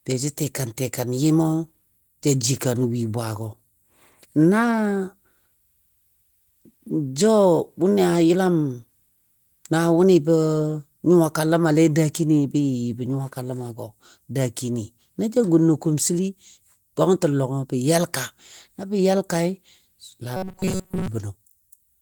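From 20.37 to 21.08 s the speech becomes a rigid, metallic 188 Hz buzz, likely robotic sound from repeated short buffers of about 5.3 ms. The spectrogram shows evenly spaced harmonic stripes, and the waveform shows roughly repeating blocks.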